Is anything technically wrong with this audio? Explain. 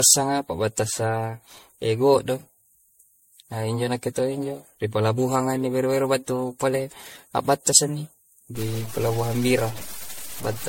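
Yes, there are two faults. Generation loss runs through the whole clip: the speech sounds swirly, hollow and smeared, and consonant attacks are blurred. This is likely from repeated lossy encoding, around ten MP3 passes, which fits a 64 kbit/s chain. Each pass requantises on a shifted frame grid, so noise and spectral gaps accumulate. On a spectrogram, nothing appears above 16.5 kHz, and the band below shows patchy holes and smeared transients.

Low bit depth without dither begins at 8.55 s and lasts to the end. The speech turns gritty and grainy, with the distortion tracking the voice, and quiet tails sputter or drop out. The sound points to roughly 6-bit truncation without dither, leaving noise only about 15 dB below the signal. The waveform shows visible stair-stepping into a few discrete levels, and the spectrogram shows signal-correlated noise spread broadly across the band.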